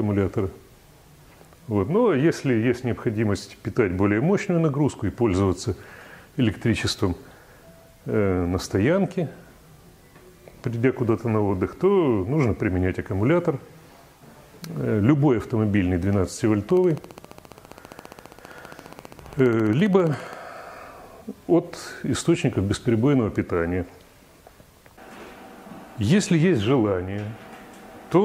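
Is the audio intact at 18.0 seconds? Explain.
No. Something in the chain is likely injecting a repeating pulse, whether interference from nearby equipment or a faulty connection or power supply. That produces a train of clicks from 16.70 to 20.34 s, so 18.0 s falls inside it. The clicks arrive at a regular 14.9 per second, around fifty in all, each much the same shape and roughly as loud as the surrounding sound. They are heard as steady ticking laid over the audio.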